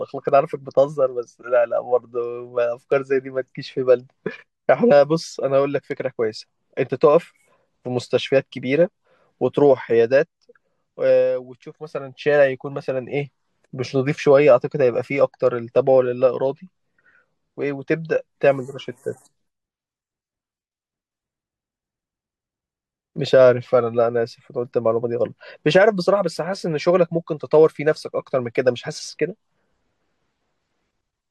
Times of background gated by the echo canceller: none

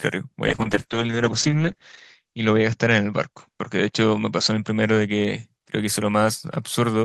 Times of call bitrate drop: 0.49-5.51

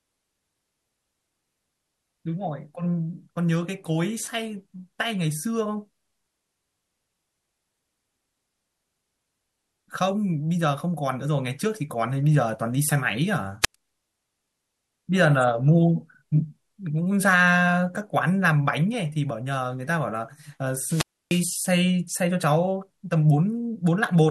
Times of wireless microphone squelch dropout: 13.62-13.75, 20.75-21.56

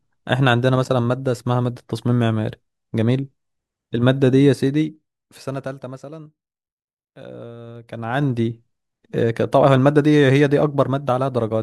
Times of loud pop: none

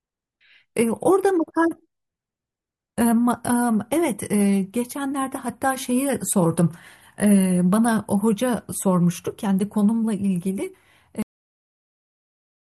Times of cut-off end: 11.22-12.74

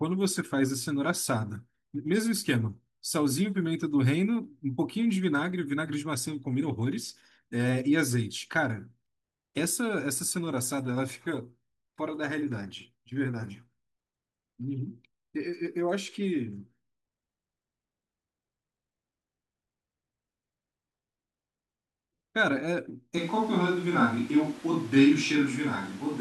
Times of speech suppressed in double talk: none

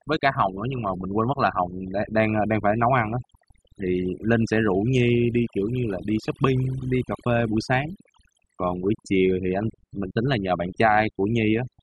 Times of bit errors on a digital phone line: none

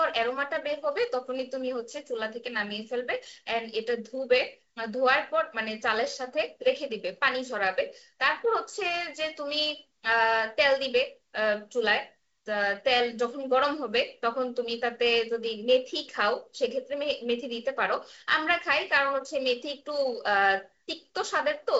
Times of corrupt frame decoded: none

